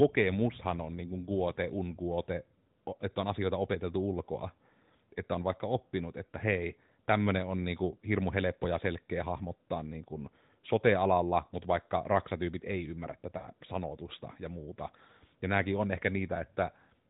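At 1.54 to 1.58 s and 13.38 to 13.48 s, lost AMR speech frames appear: the decoder bridged each gap by repeating its last good pitch and vocal tract settings at falling gain. The first fits one 20 ms frame, a brief dip or warble; the second, 40 ms, is drawn out and fades.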